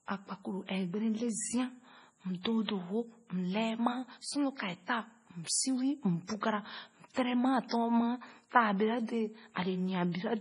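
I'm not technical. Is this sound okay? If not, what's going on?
No. The speech has been squeezed hard by MP3 compression, which is likely why it sounds watery and swirly throughout. Everything above about 10.5 kHz is simply gone, so s sounds lose their crispness. Unlike a plain muffled recording, faint parts flicker in and out.

There is also pre-echo, a brief hiss arriving just before a sharp sound rather than after it, at 2.65 to 2.68 s, at 6.41 s, and at 7.68 to 7.71 s. That early timing separates it from an echo or a click.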